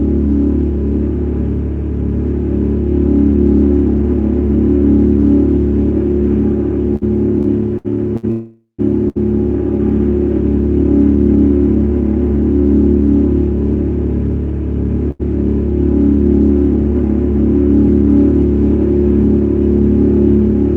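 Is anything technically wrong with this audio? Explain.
Yes, there are four delivery faults, all where the jitter buffer ran empty.

From 6.96 to 8.25 s there are repeated stalls (stutter). Packets kept arriving later than they were due, so the buffer emptied four times. Each time the receiver extended the last sound. About 208 ms was filled in this way, the longest gap 64 ms, so the audio drags and stutters with nothing lost.

From 8.31 to 8.80 s there is a call audio freeze, likely from packets held up in transit. The last sound is carried on as a fading buzz or hiss for 476 ms, ending in about 100 ms of silence. The audio then resumes exactly where it stopped, adding a gap rather than losing anything.

At 9.08 to 9.18 s and again at 15.11 to 15.21 s, there is a short stall from a late packet. A single packet missed its slot, and the receiver stretched the preceding sound for 71 ms and then 85 ms until it arrived. 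Each instance sounds like a briefly held moment with a small buzz or dip.

The Opus call path itself can be heard in its coding noise and its high-frequency limit near 12 kHz, which fits a bitrate around 20 kbps.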